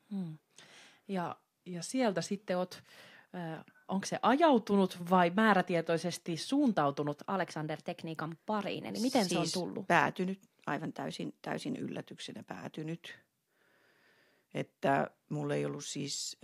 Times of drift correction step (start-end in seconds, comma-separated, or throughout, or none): 1.26-2.38, 7.30-9.44, 10.70-11.76